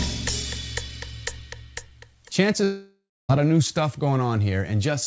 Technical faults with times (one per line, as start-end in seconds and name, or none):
2.64-3.31 long network dropout